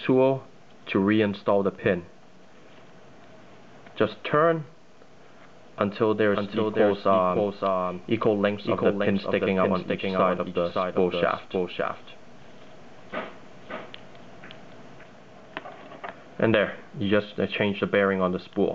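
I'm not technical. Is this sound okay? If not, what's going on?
No. From 6.33 to 15.03 seconds the audio was most likely picked up twice, with one copy arriving late: a doubled audio track. A somewhat quieter duplicate trails about half a second behind, then starts and stops abruptly.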